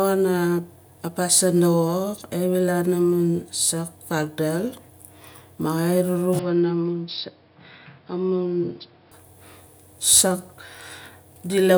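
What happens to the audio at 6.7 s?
The input likely switched to a poorer device, from 6.39 s to 9.12 s, so the speech is captured by a different, narrower-band microphone path. With nothing above 5.4 kHz, the speech turns dull and boxy at the switch, drops by roughly 5 dB, and picks up a new background noise floor around 35 dB under the speech. The change happens abruptly with no gap, and the fuller sound returns just as suddenly at 9.12 s.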